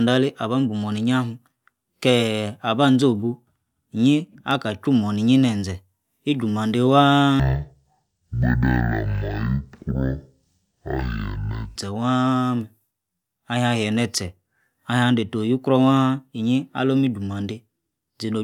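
Speech, with one fault. From 7.40 to 11.76 s, stereo was read as mono: interleaved left and right samples played as one channel, so the sound runs at half speed and an octave low.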